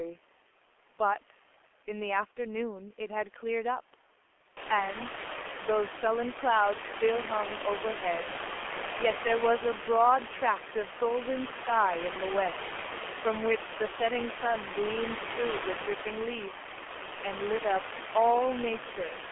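Throughout the speech, G.723.1 codec damage is heavy: the sound sits in a 300 Hz to 3.4 kHz band, muffled and hoarse, with smeared consonants. Coarse 30 ms frame coding is consistent with a rate near 6 kbit/s. Room noise rising by about 22 dB around 4.5 s is background, not a fault.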